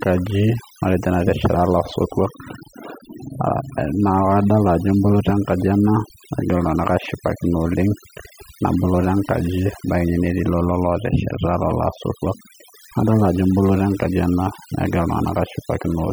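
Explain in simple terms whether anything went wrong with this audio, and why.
A noise reduction tool was set too strong, so this speech has overdone noise removal from start to finish. It shuts off frequency bands it mistakes for noise, taking quiet parts of the voice too, leaving near-silent gaps with twinkly specks.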